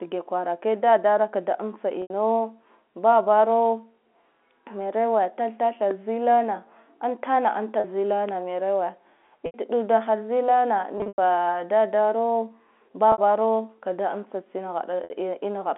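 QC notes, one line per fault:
2.02–15.10 s, packet loss with pitch repetition: gaps at 2.02 s (after "kwarake dadara kda amtsa", 80 ms), 7.80 s (40 ms), 9.46 s (80 ms), 10.98–11.18 s (160 ms scattered, longest run 100 ms), 13.12 s (60 ms) and 15.04 s (after "kada amtsa tsine", 60 ms). The last pitch period is repeated and faded, giving a held, buzzy note. The longest run fades toward silence. The durations fit 20 ms packets.
5.91 s and 8.29 s, loud pop: single sharp pops, about 10 dB above the signal at 5.91 s (between "merowe tath tathe" and "zila na") and about 5 dB at 8.29 s. The speech continues underneath each one. A likely cause is a brief voltage step from a switch, static or driver glitch, passed through the band-limited telephone path.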